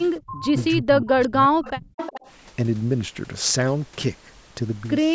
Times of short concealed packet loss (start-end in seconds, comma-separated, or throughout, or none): none